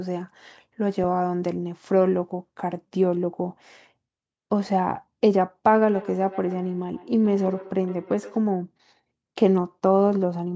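From 5.9 to 8.49 s, a second device plays back what this microphone sent, and the microphone picks it up again, beyond its own echo canceller. This feedback echo between two devices repeats the speech roughly every 150 ms, thin and ringing, peaking about 18 dB below it.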